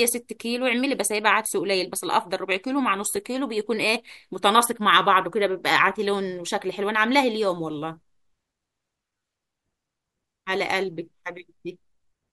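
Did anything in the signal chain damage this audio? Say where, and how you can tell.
Yes. Repeated buffer at 3.16 s and 9.18 to 9.21 s, at the driver or buffer stage: late audio made the device replay a 10 ms slice with hard joins, once and then three times, heard as a click or brief buzz.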